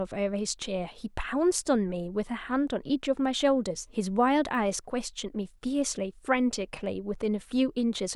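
At 4.55 s there's a sharp snap laid over the speech, and it sounds like an electrical switching spike. It's over in a few milliseconds and peaks only at about -35 dBFS. The likely cause is a nearby switch, motor or static discharge arcing briefly and the audio line picking that burst up, which adds a click on top of the speech.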